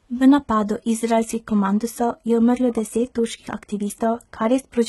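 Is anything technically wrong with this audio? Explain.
Yes. Throughout the speech, the treble sounds synthetic: s sounds come out gritty and lispy, and nothing reaches above about 11.8 kHz. That's likely heavy HE-AAC compression, which fits a bitrate around 16 kbps. Only the lower band is truly coded, and the top end is copied up from below, so its harmonics don't line up.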